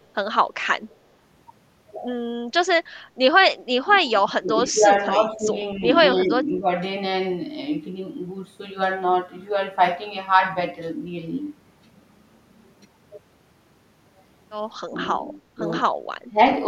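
Speech with speech suppressed in double talk at 3.87–4.9, 5.18–5.47, 5.76–5.84, 6.23–6.67, 14.89–14.97 and 16.31–16.38 s. The level dips by about 10 to 15 dB, showing as shrunken waveform stretches and faded spectrogram patches, likely from an echo canceller turning down both talkers.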